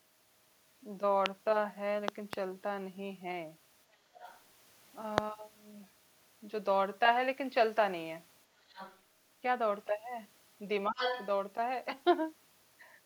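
A loud pop hits at 1.26 to 1.28 s. It stands some 20 dB above the speech, which carries on beneath it. A sudden voltage step, likely from a plug, switch, static or driver glitch, jumps into the signal. At 2.08 to 2.35 s two more pops come in quick succession, similar in height. They sound like sharp thumps.

At 4.15 to 4.41 s the other side's voice leaks through. It sits roughly 20 dB under the speech, faint. The far end plays from a loudspeaker, and the echo canceller likely missed part of it.

Another loud pop lands at 5.18 s. It is the strongest, some 25 dB above the signal.

A second stretch of the other side's voice leaking through runs from 8.68 to 9.0 s. Again it is about 20 dB down, a quiet scrap behind the talker.

At 10.9 to 11.03 s the speech is suppressed in double talk. Both sides talk at once. The echo canceller likely cannot tell its own talker from the echo, so it turns everything down. 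The voice dips by up to about 25 dB, for roughly a sixth of a second in all. It sounds ducked.

Overlapping this, from 10.98 to 11.27 s, the other side's voice leaks through strongly. It is only about 5 dB below the speech. It comes through loud, likely because echo cancellation failed.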